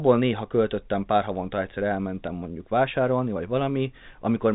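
No technical faults are present.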